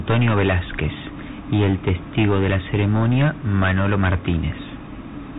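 Speech with hard clipping throughout, driven about 12 dB past full scale. Roughly one sample in fourteen is cut flat, giving harsh fuzz rather than soft saturation's rounded warmth.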